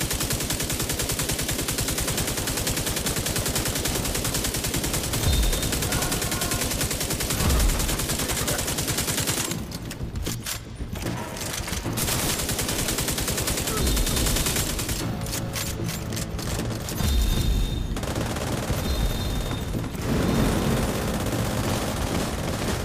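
From 14.1 s onward, a doubled audio track: a copy about 5 dB quieter trails around 300 ms behind, starting abruptly without echo decay, likely a second capture path.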